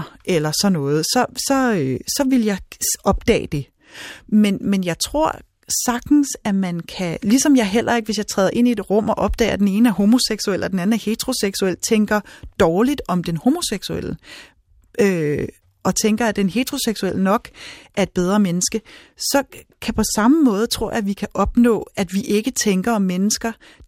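A speech recording, with no technical faults to report. Nothing in how the audio was captured or carried stands out anywhere in the clip.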